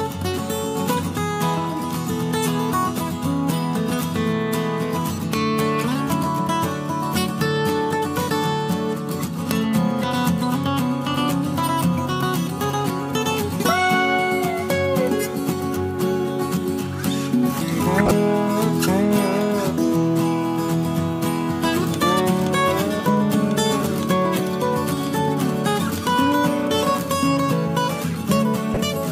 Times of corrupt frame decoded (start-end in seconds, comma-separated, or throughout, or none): 1.64, 17.98-18.11, 28.74-28.77